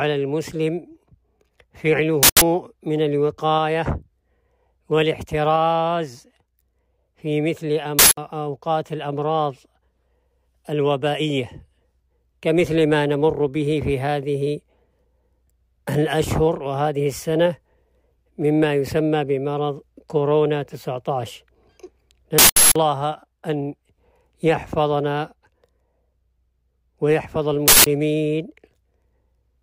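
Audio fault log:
2.23 s, 7.99 s, 22.38 s, 27.68 s: uninitialised buffer. Each is a loud burst of digital noise from leftover memory played as samples, about 0.19 s long (0.37 s at 22.38 s), which fits 8192- and 16384-sample blocks.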